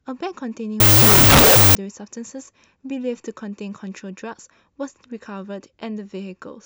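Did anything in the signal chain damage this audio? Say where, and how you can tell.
Yes: wrong sample width at sample-format conversion, 0.80–1.75 s. 16-bit data read as unsigned 8-bit bury the speech in loud noise at half speed, seen as a broadband spectrogram smear.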